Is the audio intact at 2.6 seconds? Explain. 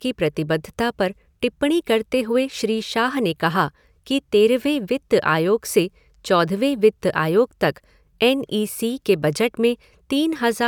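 Yes, at 2.6 seconds the speech is intact, with no dropout, click, distortion or other fault at that point.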